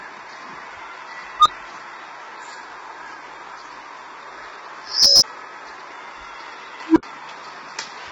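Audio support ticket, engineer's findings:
Low-delay AAC compression throughout, likely AAC-ELD at a starved rate fitting around 16 kbps. Short frames smear harmonic detail; heavy codec damage gives grainy, rough texture, noise filling gaps, top band empty above 7.8 kHz.

Unstable filter, three bursts. Recursive filter coefficients diverge, output grows until overflow, then reset. 1.39–1.48 s: tone near 1 kHz swells over 63 ms, then 23 ms dropout. 4.82–5.23 s: tone near 5 kHz builds over 389 ms, then 23 ms silence. 6.86–7.03 s: low tone near 300 Hz builds over 100 ms, then 70 ms silence.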